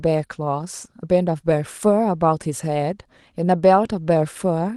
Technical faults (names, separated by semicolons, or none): none